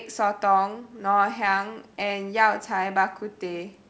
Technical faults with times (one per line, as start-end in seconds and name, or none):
none